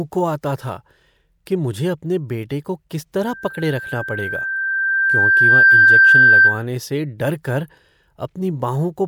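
Speech, disrupted first by a loudspeaker feedback squeal from 3.22 to 6.65 s, beginning after "अपने बेटे को किस" and ending before "से डर कर". The microphone re-amplifies its own loudspeaker, so a 1.6 kHz tone swells over about two seconds to roughly 15 dB above the speech, drawing a bright horizontal line across the spectrogram. At 5.76 s, compressed frames skipped make the audio jump ahead where about 30 ms of audio vanishes, which fits a single dropped 26.1 ms frame.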